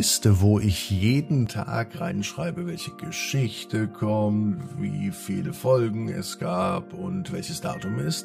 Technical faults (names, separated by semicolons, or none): channel delay (comb filtering)